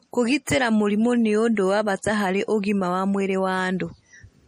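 Throughout the speech, the sound is watery and swirly with smeared consonants, likely from MP3 compression at a low bitrate near 40 kbps; spectrograms show flickering holes and nothing above 15.2 kHz.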